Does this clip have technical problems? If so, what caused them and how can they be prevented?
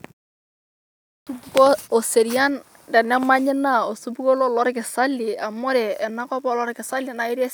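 Yes: clipped start after a pause at 0.69 to 1.27 s. After about 0.64 s of silence the output device slept, swallowing roughly 0.58 s of onset; the waveform jumps abruptly from flat silence. Keeping the device awake during silence, for example by disabling its power saving, prevents this.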